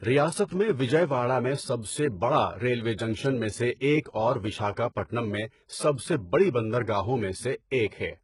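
From start to finish, the speech carries heavy HE-AAC compression damage. The top of the spectrum is present but false. Nothing survives above 11.1 kHz. The likely cause is band replication, where treble is copied upward from lower bands and shaped only roughly. The rebuilt highs do not match the real harmonics. S sounds turn gritty and lispy, with a metallic sheen. The degree of damage fits a very low bitrate, around 12 kbps.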